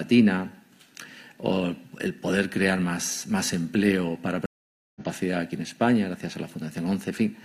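A stream reconnect at 4.46 s: the connection dropped, leaving about half a second of silence, and the sound resumes roughly half a second further along.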